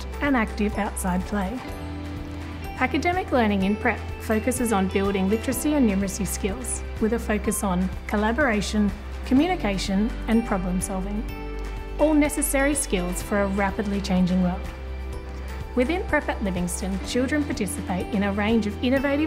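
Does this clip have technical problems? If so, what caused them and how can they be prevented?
No, there are no technical problems to report in this clip. Nothing in it calls for a fix or a preventive measure.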